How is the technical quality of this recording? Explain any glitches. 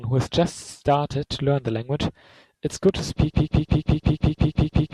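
Two clear glitches mark the second half of the speech.

A loud pop, two quick pops, lands between 2.89 and 3.01 s, peaking about 5 dB above the speech. The likely cause is a sudden voltage step or spike, from a plug, a switch, static or a driver glitch, added to the signal and briefly shaped by the circuitry after it. Unlike a dropout or a cut, the speech carries on unbroken beneath the pops, which sit on top rather than replacing anything.

From 3.31 s to the end, a broken-record loop takes over: a 174 ms fragment repeats back to back nine times, identical each pass. The likely cause is a stalled player, encoder or stream that kept resending the last piece it held, so the speech that belonged in those last seconds is gone. Its exact repetition of a fixed slice is what distinguishes it from an echo, which decays, or a stutter, which varies.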